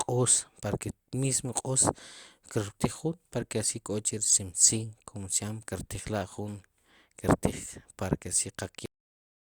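At 8.86 s the final buffers were never written out, giving a cut-off end: the speech stops mid-sound and drops straight to digital silence, with no decay.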